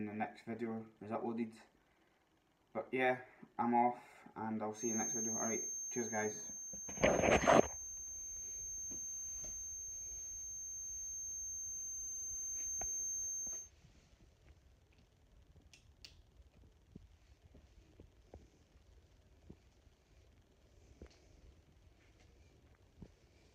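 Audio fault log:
4.71–13.72 s, feedback whistle: a thin, steady tone near 6.3 kHz sits just a few decibels below the main sound and swells and fades slowly in level. This is likely a loudspeaker-to-microphone loop poised at the edge of feedback, sustaining one frequency without running away.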